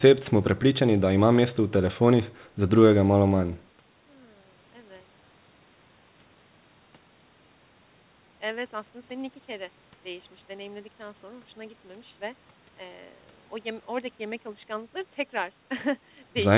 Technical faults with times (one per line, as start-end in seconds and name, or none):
0.00-16.57 DC offset